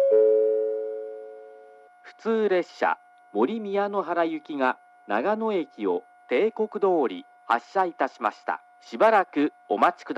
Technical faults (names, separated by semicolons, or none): none